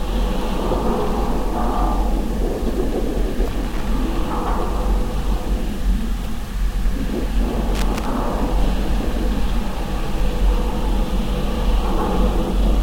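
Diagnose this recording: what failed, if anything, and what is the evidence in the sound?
Two short bursts of irregular scratching crackle break into the audio, from 3.50 to 3.88 s and again from 7.75 to 8.06 s, each lasting well under half a second. The failure is in the analogue wiring: loose connector crackle. A worn or dirty contact is intermittently opening and closing as the plug or cable shifts, so the signal is chopped on and off in rapid, uneven bursts. Any DC offset on the line adds pops at each break.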